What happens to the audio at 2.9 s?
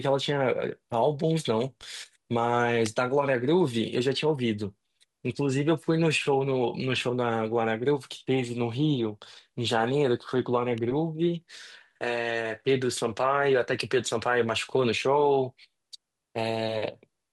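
A nearby switch or motor most likely threw off a brief arc that the audio line picked up at 2.86 s. It lands as an electrical switching spike, a sharp snap peaking around -15 dBFS, sitting on top of the speech.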